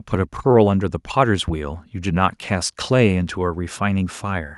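A speech clip with a single loud pop from 1.48 to 1.52 s, standing well above the speech, likely a voltage pulse from a plug, switch, static or driver glitch. Unlike a dropout or edit click, the speech carries on unbroken underneath the thump.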